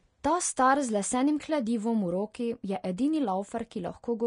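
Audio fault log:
Throughout, Vorbis compression: the speech has a grainy hiss in the treble, smeared consonant attacks, and nothing above 10.6 kHz. This is likely low-quality Vorbis coding, quantising the high band so coarsely that detail becomes noise, consistent with roughly 35 kbps.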